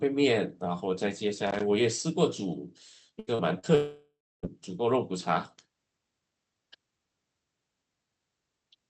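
Speech carried over a call path, band-limited to about 8 kHz by the codec, with several transmission and contact faults. At 1.46 to 1.63 s there is loose connector crackle: an irregular scratchy burst lasting about 0.17 s, the sound of a worn or dirty contact making and breaking as it moves, chopping the signal. At 3.19 to 3.30 s a burst of packet loss removes about 80 ms of audio. The receiver continues the last sound and fades it for roughly 75 ms, and the speech then resumes further along with that stretch gone. Two short concealed packet losses follow, at 3.35 to 3.42 s and 3.59 to 3.66 s, each about 40 ms. In each gap the decoder extrapolates from the preceding sound and blends back, heard as a brief smear or wobble where a short sound can drop out. From 3.75 to 4.46 s the audio decays as the last sound is continued and faded, and then about 250 ms of near-silence before speech returns, with roughly 0.68 s missing. 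The likely cause is a long network dropout that the receiver could only partly conceal.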